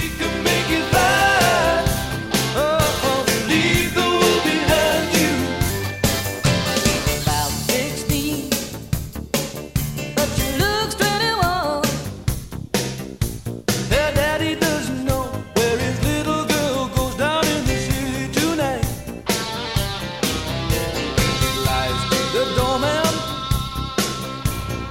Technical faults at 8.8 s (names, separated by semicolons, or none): section at the wrong speed